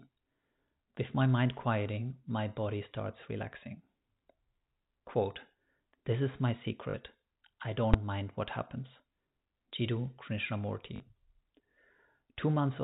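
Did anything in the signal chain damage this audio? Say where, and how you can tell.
Yes. There are two kinds of damage, one in the network and one in a processing stage.

Packet loss with the last packet repeated occurs at 6.90 to 6.94 s, just after "is my", and again at 10.96 to 11.00 s. Each gap lasts 40 ms. The receiver filled it by replaying the last packet it got. The sound there becomes a brief robotic stutter with a buzz near 50 Hz, which fits two lost 20 ms packets. The G.711 telephone coding itself, band-limited below 4 kHz, is intact.

Invalid numbers at full scale cause a single loud bang at 7.94 s, just before "mind what happens". A calculation produced infinite or invalid values, and these were clamped to the largest sample value. The bad block lasts about 5 ms, which fits a 256-sample processing block. That is too short to hear separate pops at its start and end, so it lands as one bang. 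This points to a floating-point processing stage, not the network.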